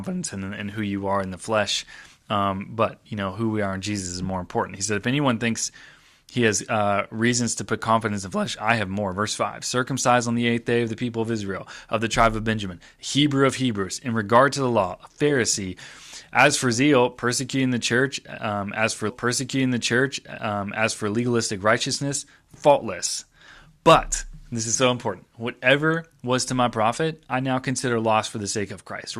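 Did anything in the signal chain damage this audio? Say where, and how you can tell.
Yes. A stream segment was repeated at the streaming stage: the player queued the same chunk twice, so about 2 s of speech after "church um as for" replays from 19.09 to 21.09 s. A small blip marks the jump back, before "legalistic righteousness faultless" continues.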